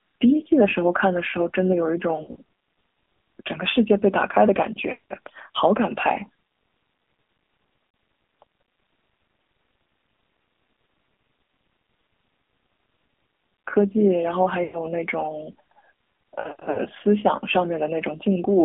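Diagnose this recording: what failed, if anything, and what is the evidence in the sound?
Codec stage: the speech is squeezed into roughly 200 Hz to 3.6 kHz and sounds buzzy and synthetic, the signature of the AMR narrowband mobile codec at 7.4 kbps.

Network/radio stage: lost AMR speech frames cause brief warbles and drawn-out dips at 2.16 to 2.36, 5.00 to 5.04, 7.90 to 7.94, 14.64 to 14.78 and 16.40 to 16.79 s. Each time, the decoder stretched the last good pitch with fading gain.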